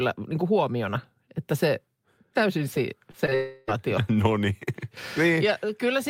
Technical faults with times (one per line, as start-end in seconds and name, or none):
3.11-3.33 short concealed packet loss
3.35-3.69 long network dropout